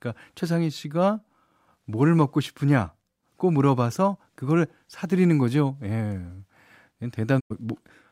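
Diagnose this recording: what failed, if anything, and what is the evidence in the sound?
Near the end of the speech, the sound fades to silence over about 20 ms at 7.39 s and stays muted until 7.52 s. Nothing sent in that gap comes back. This is a digital broadcast dropout at the reception and decoding stage: the receiver stopped getting valid frames, or they failed their checksum, so it muted the output rather than decode corrupt data. The roughly 0.1 s of missing audio fits about three lost frames.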